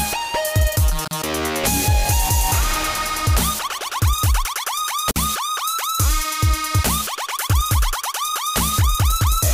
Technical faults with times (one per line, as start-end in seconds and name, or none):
1.08-1.11 gap at a join of encoded pieces
5.11-5.16 gap at a join of encoded pieces